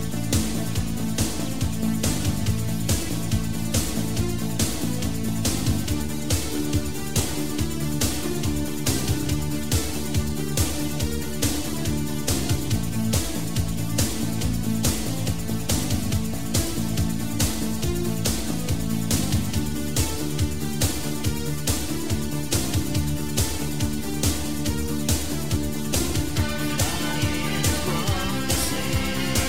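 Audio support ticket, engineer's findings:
Crude rate conversion, whole clip. Gritty inharmonic fizz riding on louder and brighter passages. Error sits about 20 dB below the signal. Periodic repeated samples, no interpolation or filtering, which fits a 44.1 kHz to 48 kHz resampler. Check converter settings.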